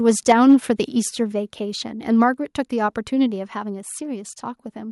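From 0.08 to 0.55 s the loudest syllables sound harsh and crackly with flattened peaks: microphone overload, likely the input driven about 5 dB past the converter's limit, clipping a few percent of samples. At 0.32 s and again at 1.32 s, voice and background drop abruptly, by about 2 dB and then about 4 dB. This is a microphone volume step-down, likely with the call software stepping the input gain down in response.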